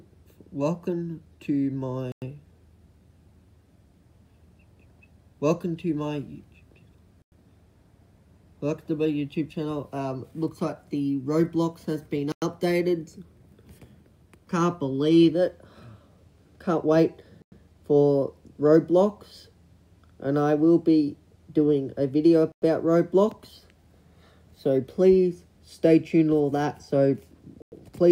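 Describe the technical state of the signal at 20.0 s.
At 20.0 s the audio is intact, with no dropout, distortion or other fault audible at that moment.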